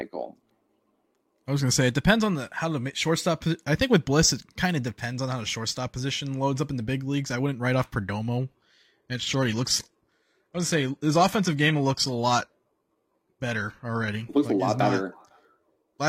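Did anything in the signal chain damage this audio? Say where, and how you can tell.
Yes. The damage is at the network and codec stage: an adaptive stream at a lower bitrate from 8.37 s to 14.37 s, between "I wouldn't write off" and "like a lot". Quality switches abruptly with no gap. The treble stops at about 14.9 kHz in that stretch, and codec artefacts thicken. The connection slowed, and the player swapped to a lower rendition, which sounds like roughly 96 kbit/s AAC falling to a 20 kbit/s HE-AAC stream, then recovered six seconds later.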